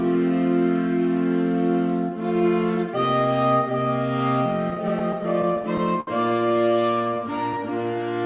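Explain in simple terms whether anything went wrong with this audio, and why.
Two problems can be heard, both from audio arriving unevenly over a call connection.

From 4.7 to 6.09 s there are repeated stalls (stutter). Data kept arriving late, so playback ran dry 11 times. Each time, the last bit of sound was stretched to cover the wait, the longest about 66 ms. Nothing is lost, but the sound catches and drags.

From 6.86 to 7.64 s there is a jitter buffer slow-down. The receiver was short of stored audio or had just raised its target delay, so it repeated tiny slices of sound to build a reserve. Playback runs at 93% speed, about 61 ms longer, with the pitch unchanged but sounds slightly drawn out.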